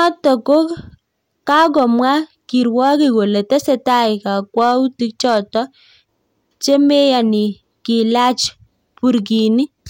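Hard clipping runs through the whole speech clip. The signal was driven about 3 dB past what a stage in the chain could pass, so the highest peaks were sliced flat rather than rounded. Only a small share of the samples, roughly half a percent, hit that ceiling, which keeps the damage to brief crackle on the loudest moments instead of a steady fuzz. Each flattened top adds high harmonics, giving those peaks a brittle edge.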